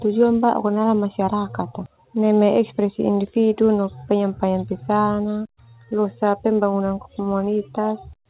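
A speech clip carried over a narrowband call path, with nothing above 4 kHz, which fits G.711 A-law at 64 kbps. At 1.86 to 1.88 s, right after "ka dalam masyarakat ka", there is a skip ahead: roughly 0.4 s of audio was dropped, either in transit or by an overflowing jitter buffer, and the two sides are spliced together with no fill. From 1.96 to 3.70 s, ending at "no penyampaian", a jitter buffer speed-up runs the speech at 110% with the pitch unchanged. The receiver trimmed short pitch-period pieces, about 0.2 s in total, to bring down excess buffered delay, so this stretch sounds hurried.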